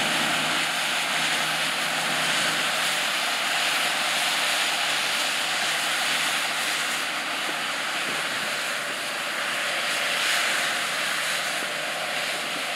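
Nothing in the audio stands out as a technical fault at any point.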